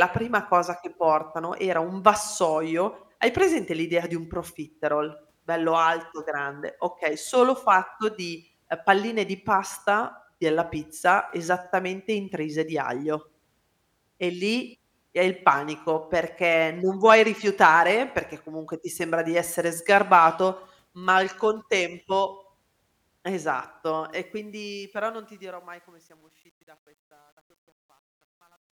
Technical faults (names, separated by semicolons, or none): truncation distortion on a fade